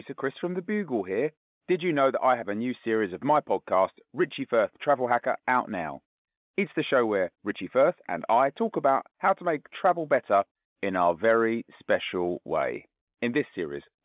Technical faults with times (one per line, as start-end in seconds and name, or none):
none